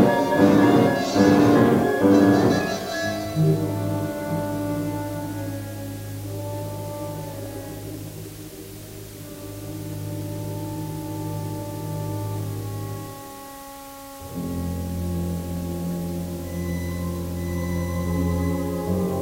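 From start to finish the audio carries a constant, even hiss, the sign of low bit depth with dither. The sound has been reduced to what fits 7 bits, and dither added before rounding turns the rounding error into steady white noise, sitting only about 20 dB below the signal. Unlike undithered low bit depth, the noise doesn't rise and fall with the sound, and there's no gritty distortion or sputtering on quiet passages.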